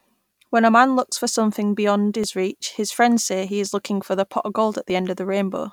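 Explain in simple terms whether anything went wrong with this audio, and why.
Four sharp clicks, at 1.17, 2.24, 3.66 and 4.90 s, are likely dropped samples: tiny gaps, under a millisecond, make the waveform jump abruptly.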